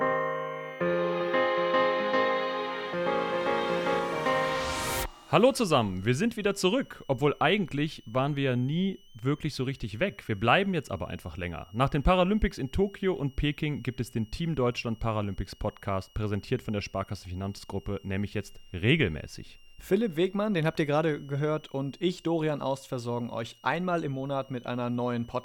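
A thin, high whistle sits under the sound for the whole clip, wandering between about 2.78 and 3.15 kHz, roughly 35 dB down. This is switching supply whistle: a power supply's switching regulator running in an audible burst mode or beating with another supply, its pitch shifting with load.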